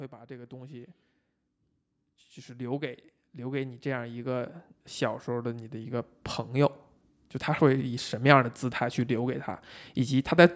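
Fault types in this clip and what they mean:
Automatic gain rising: The gain control judged the input too quiet and turned it up slowly. Speech and background swell together. It happens three times: 0.1 to 1.02 s, 2.45 to 4.59 s, and 5.26 to 7.92 s, rising about 4, 9 and 6 dB.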